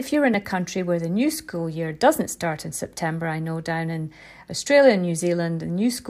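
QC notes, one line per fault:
0.34 s, block of digital silence: About 1.45 ms of samples, which fits a 64-sample block, were written out as zeros between "you're in" and "a country where the". The signal drops straight to digital silence and returns with no fade, and with a gap this short the two hard edges are heard as a tick or dip rather than an audible hole.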